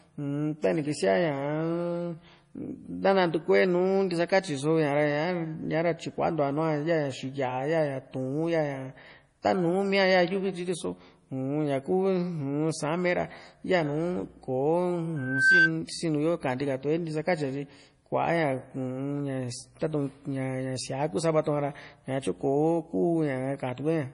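From the start, the speech sounds dull and smeared, with nothing above 10.5 kHz. This is likely low-bitrate audio saved at a high bitrate: the artefacts point to an MP3 at about 32 kbit/s re-encoded at about 192 kbit/s, which cannot restore the lost detail.

From 15.16 to 15.72 s, a loudspeaker feedback squeal rises as a single 1.6 kHz tone. It swells over roughly a third of a second to about 10 dB above the speech. A microphone was picking up its own loudspeaker, and the loop gain exceeded one at that frequency.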